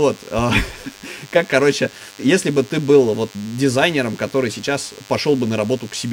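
Throughout the speech runs DECT cordless phone buzz, a thin 100 Hz rasp from rectified radio bursts, about 25 dB down, harsher and richer in harmonics than smooth mains hum.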